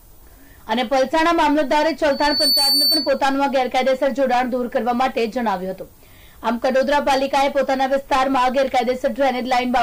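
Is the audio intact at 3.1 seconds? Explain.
No. From 2.10 to 3.21 s a microphone re-amplifies its own loudspeaker, so a 4.5 kHz loudspeaker feedback squeal swells within about 0.4 s to roughly 5 dB above the sound.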